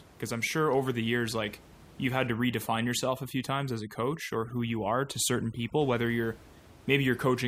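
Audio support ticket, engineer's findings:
Overdone noise removal 2.27–5.81 s; background drops and breaks up into twinkling specks. Overdone noise removal: suppressor set too strong, gating bands near its noise estimate and taking quiet speech detail with them. Room noise about 24 dB below speech elsewhere.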